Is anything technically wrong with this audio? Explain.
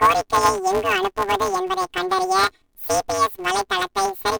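Yes. Throughout the clip, the speech shows planar audio read as interleaved. The audio was stored in blocks holding all left-channel samples followed by all right-channel samples, but playback treated it as alternating left-right pairs. Each block therefore plays twice at double speed, left then right, and the overall pace stays correct. Because the blocks are very short, about 5.33 ms, which fits 256-sample blocks, the result is a robotic buzz at roughly 188 Hz rather than an audible octave shift.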